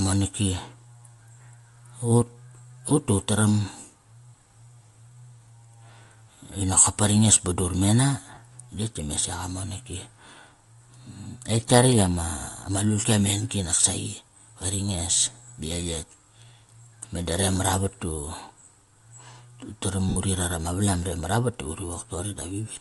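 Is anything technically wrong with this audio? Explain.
Yes. Two faults are audible in this speech.

Bluetooth LC3 compression is plainly audible throughout, as a breathy, grainy edge on the voice. The likely cause is a low-bitrate LC3 link, consistent with about 48 kbps and 10 ms frames. The encoder zeroes much of the upper spectrum and fills it with noise.

Lost LE Audio frames occur twice. The first runs from 8.35 to 8.37 s, between "ba dur mena" and "tetk dime". It lasts 20 ms. The second runs from 20.09 to 20.17 s, just before "uri rat ama valam". It lasts 70 ms. The decoder repeats the last spectrum with random signs, then fades it. Both gaps smear into noise. The longer one dies away.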